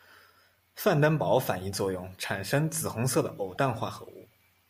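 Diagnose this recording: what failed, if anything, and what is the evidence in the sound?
Damaged data in a compressed stream, at 3.55 to 3.57 s, just after "红色的偶". This is a codec-stage failure: corrupted bytes in the compressed speech made the decoder misread a frame and lose sync, leaving a brief 22 ms disturbance while it searched for the next valid frame header.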